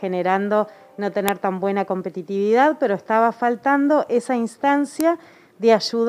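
All the way through there's sample clock jitter. The converter's clock is wandering by something on the order of a microsecond or two, so each sample lands a touch early or late. Because that timing error costs more where the waveform is changing fastest, you get a faint hiss and roughness, roughly 40 dB under the signal, that thickens on loud and bright passages and drops away when the sound goes quiet.

Then at 1.28 s there's an uninitialised buffer: a block got played before any audio was written into it, so whatever junk was sitting in memory went out as samples. It's a sudden, loud crack of digital noise lasting about 1.33 ms, which fits a 64-sample block. The same thing happens again at 5.01 s, shorter this time at about 0.67 ms, pointing to a 32-sample block.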